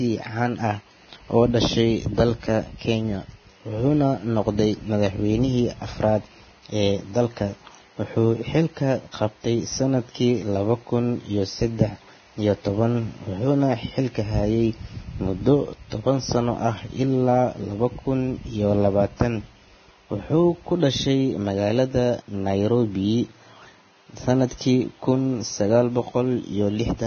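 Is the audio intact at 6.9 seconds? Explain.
No. At 6.9 seconds, as across the whole clip, the speech sounds hissy and grainy, with roughened tones and smeared consonant onsets and nothing above 6.5 kHz. The likely cause is heavy Vorbis compression, which fits a bitrate near 18 kbps. It quantises the treble residue so coarsely that detail becomes noise.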